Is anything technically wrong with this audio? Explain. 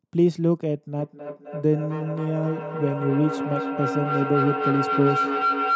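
Yes. Feedback howl runs from 0.99 s to the end of the clip. A microphone is picking up a loudspeaker carrying the same call, and each pass around that loop comes back louder rather than quieter. The repeats narrow toward the frequency the loop favours, here around 1.5 kHz, building into a sustained tone, with the loop repeating about every 0.3 s, that peaks about 3 dB below the speech. Nothing breaks the loop, so it never stops.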